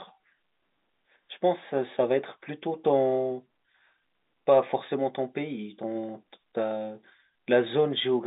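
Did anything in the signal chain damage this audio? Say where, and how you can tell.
No, nothing in the chain damaged this speech, which carries the ordinary marks of G.711 telephone coding: a line band of about 200 Hz to 3.7 kHz with nothing above 3.8 kHz, and at most a faint level-following noise floor consistent with a 64 kbps A-law telephone path.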